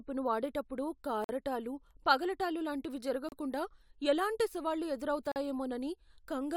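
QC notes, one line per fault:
1.24–1.29 s, 3.29–3.32 s, 5.32–5.36 s: gap between stream segments. Holes of about 48, 33 and 42 ms, spaced roughly 2 s apart, break the speech at each segment boundary where timestamps fail to meet. The waveform drops to silence with hard edges, and the spectrogram shows clean vertical blank columns.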